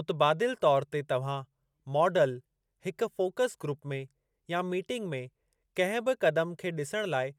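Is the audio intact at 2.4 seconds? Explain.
Yes, at 2.4 seconds the speech plays through intact, with no dropout, click, distortion or other fault audible at that moment.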